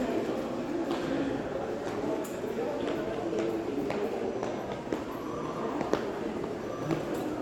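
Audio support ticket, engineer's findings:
No audible defects in the everyday-sound recording; level, continuity and frequency balance hold steady throughout, with nothing pointing to a fault in capture, processing or playback.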